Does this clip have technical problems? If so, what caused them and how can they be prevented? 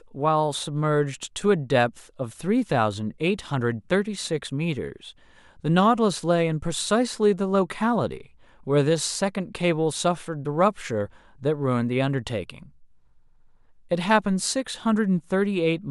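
No, the speech signal shows no technical faults at any point, so there is nothing to trace to a cause or to prevent.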